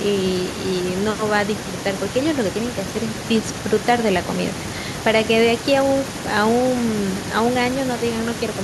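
Listening closely to this recording of speech, nothing stood out as a technical problem at any point.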